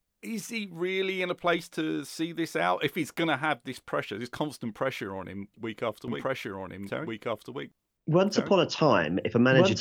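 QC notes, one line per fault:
6.08 s to end, doubled audio track: at 6.08 s a second full-band copy of the speech cuts in abruptly and runs to the end. It trails the original by about one and a half seconds at roughly equal level, with no decay or room colouring, so two identical streams overlap. This is likely a second capture through a slower path. On a spectrogram, matching patterns repeat shifted right, and the waveform thickens suddenly at 6.08 s.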